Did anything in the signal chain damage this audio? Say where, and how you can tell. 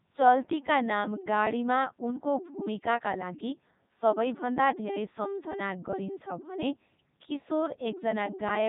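Yes, at the codec stage: a Codec 2 vocoder, heavily damaging, for the whole clip. Speech comes out robotic and buzzy, resynthesised from sine waves rather than kept as a waveform, with nothing above 3.8 kHz. That fits its top 3.2 kbit/s mode. Plain narrowband filtering would dull the sound without this synthetic buzz.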